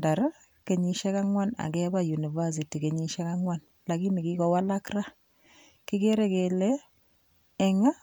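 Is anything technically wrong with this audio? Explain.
No, nothing technically wrong can be heard in this speech recording; the signal holds steady and intact throughout.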